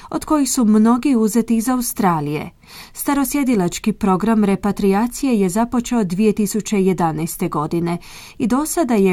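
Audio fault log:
Nothing stood out on listening to the speech in this clip.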